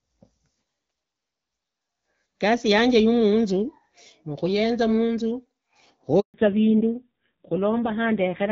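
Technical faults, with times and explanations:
6.20 to 6.34 s, handover gap: the speech fades out within a few tens of milliseconds and stays silent for about 140 ms before resuming. The call was passed between networks, no speech frames arrived during the switch, and whatever was said then is gone.
6.34 s to the end, fallback to narrowband: right after the gap the speech turns duller and rougher, with nothing above 4 kHz. The call dropped from clear HD Voice wideband coding to an older narrowband codec, and the raspy texture fits a low rate near 5.9 kbit/s.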